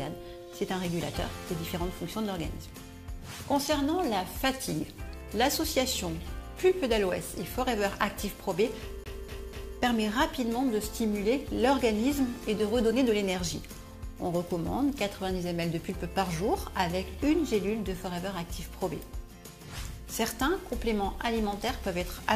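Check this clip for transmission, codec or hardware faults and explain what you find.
One hardware fault shows up: the CD is stuck on one turn from 9.04 to 9.77 s. A scratch keeps knocking the laser back one track at the same point of the disc's rotation, so the player rereads the same stretch instead of moving on. The result is a fast, even stutter: a 0.24 s slice of audio plays three times in a row, with a brief mute at each jump back, before playback continues.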